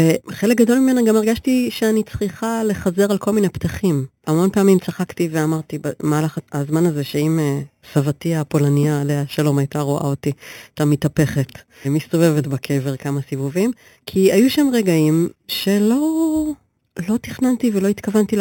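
Speech runs the whole clip with a bright metallic fizz riding on it, which is imaging from sample-and-hold upsampling. The fizz points to audio at 8 kHz raised to 44.1 kHz by repeating each sample, with no smoothing filter. Mirror copies of the spectrum sit around each multiple of 8 kHz. The lowest copy fills 4 to 8 kHz at about 20 dB below the speech. Its level tracks the talking, and it moves opposite to the pitch.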